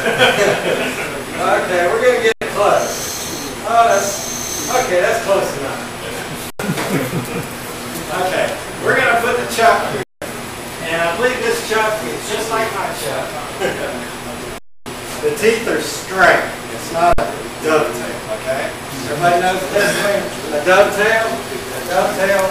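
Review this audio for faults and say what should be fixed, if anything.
Underrun with held sample at 2.32–2.41 s, 6.50–6.60 s, 10.03–10.22 s, 14.58–14.86 s and 17.13–17.18 s. Each time the output buffer ran empty and the converter held its last value, so the waveform goes flat. Roughly 50 to 300 ms of audio was lost at each event.

Prevent it by enlarging the output buffer or giving the thread that fills it higher priority, so data always arrives in time.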